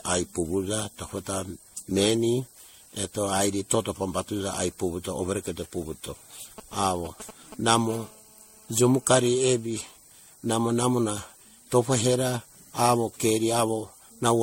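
Generation loss runs throughout: the speech sounds swirly, hollow and smeared, with blurred attacks and nothing above 16.6 kHz, likely from repeated low-bitrate MP3 re-encoding, several passes deep.

GSM signalling bursts appear from 6.58 to 7.78 s: a galloping pattern of short 217 Hz buzzes, roughly 15 dB under the speech, as a nearby phone's radio pulses are rectified.

GSM phone buzz follows from 7.90 to 9.66 s: a steady, raspy 217 Hz buzz rich in harmonics, about 27 dB below the speech, from a phone transmitting in bursts 217 times a second during a call.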